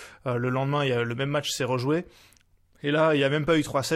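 No technical faults are audible.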